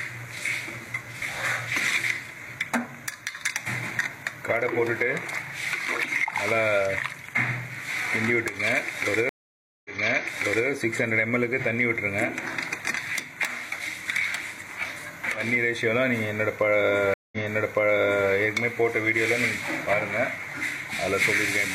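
At 9.29 s and 17.14 s the audio drops out for 555 ms and 184 ms, then resumes about 0.84 s and 0.98 s earlier: stream reconnects, each restarting the decoder from a resent burst.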